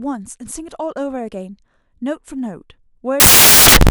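From 3.2 s to the end, samples built from the wrong bytes turn the speech into loud, harsh broadband noise, filling the spectrogram.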